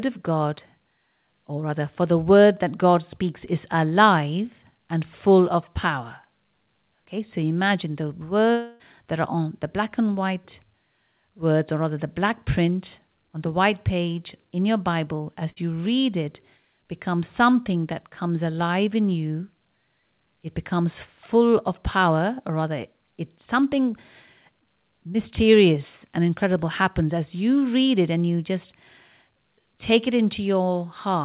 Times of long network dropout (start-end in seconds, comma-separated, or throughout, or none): 8.52-8.82